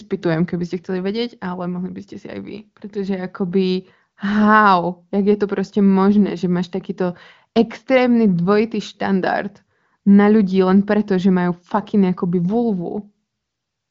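No technical faults are audible.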